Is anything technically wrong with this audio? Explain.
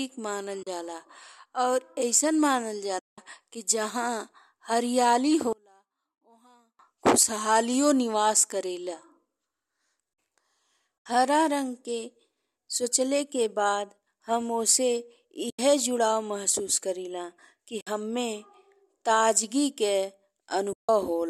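Yes. Six times the speech drops into a short, soft-edged silence: 0.63 to 0.67 s, 2.99 to 3.18 s, 11.00 to 11.06 s, 15.50 to 15.59 s, 17.81 to 17.87 s and 20.73 to 20.89 s, lasting from 40 ms up to 190 ms. This is AAC frame loss with muting. Frames never reached the decoder, so it output zeros in their place, and the overlapping windows fade the sound out and back in. The gap lengths fit runs of roughly 10 ms frames.

From 5.53 to 6.79 s the speech nearly disappears, falling about 32 dB and leaving only a faint remnant. The likely cause is one channel inverted. With one side's polarity reversed, the centred speech, which is common to both channels, cancels when they are summed to mono. Only the small difference between the channels survives.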